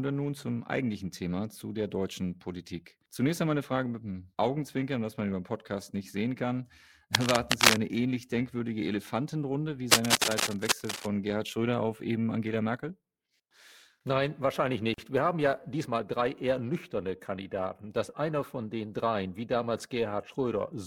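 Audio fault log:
Throughout: periodic clock jitter. The speech carries a rough, metallic edge that drops away in pauses. Interference wobbles the converter clock at roughly 500 Hz. Each component gains sidebands at that spacing either side, strongest on the higher sounds.
7.15 to 7.80 s and 9.91 to 11.06 s: cable scratch noise. Dense, uneven scratching sits over the speech, about 5 dB above it. The first burst falls between "nicht sehen kann" and "ähnlich denkwürdige". A moved, worn cable or connector is the likely cause, its contact resistance jumping rapidly.
14.94 s: gap at a join of encoded pieces. A 40 ms silence opens in the speech, its edges smeared, before the sound resumes where it stopped. Two separately encoded pieces were joined untrimmed, keeping the start delay and end padding.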